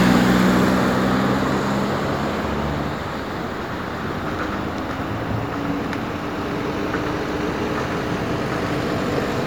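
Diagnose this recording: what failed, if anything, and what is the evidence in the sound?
Nothing failed in this recording, and there is no evidence in the sound of any fault at any stage.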